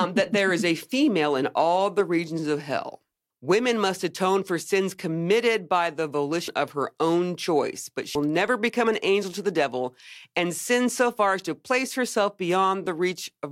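Whole compressed frames skipped twice: at 6.48 s about a tenth of a second of speech vanishes, and at 8.15 s roughly a fifth of a second, which fits one and then two frames of about 93 ms. Each time the speech simply jumps ahead.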